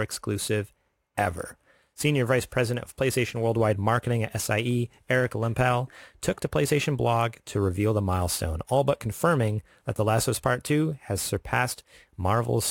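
Throughout, a gritty inharmonic fizz trails loud, bright speech about 25 dB down: crude rate conversion by dropping samples, fitting a 48 kHz to 44.1 kHz change.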